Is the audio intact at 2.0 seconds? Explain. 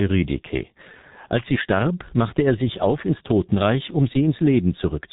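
No. At 2.0 seconds the speech carries G.723.1 codec damage, which runs through the whole clip rather than appearing as a local event. The codec squeezes speech into 30 ms frames and rebuilds it from a coarse, slowly updated voice model, consistent with a rate near 6.3 kbit/s. Nothing reaches above 3.8 kHz, so the speech sounds muffled, and the damage is heavy: a hoarse texture with smeared consonants.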